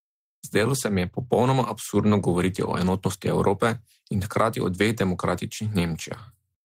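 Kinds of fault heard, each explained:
No faults turn up in this speech recording, so there's nothing to list here.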